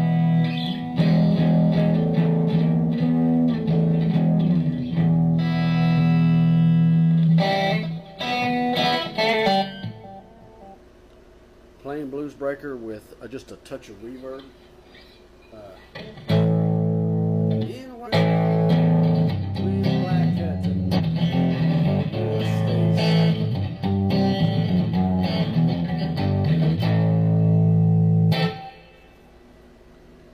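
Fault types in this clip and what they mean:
Compressed frames skipped: whole frames vanish, so the sound jumps ahead about 50 to 200 ms.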